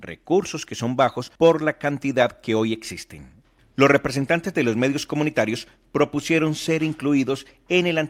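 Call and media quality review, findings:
No faults heard in the speech; nothing to escalate.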